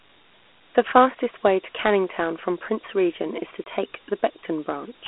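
A gritty hiss rides along with the speech from start to finish, and the sound is thin and boxed-in, with no low body below about 250 Hz and nothing at all above 3.8 kHz. This is Dialogic VOX ADPCM damage. The audio was squeezed into 4-bit adaptive steps, which fits a 32 kbps telephone-grade stream. Each coarse step leaves a quantisation error that tracks the signal, so the grit swells with the speech. The narrow 250 Hz to 3.4 kHz line band explains the muffled, phone-like tone.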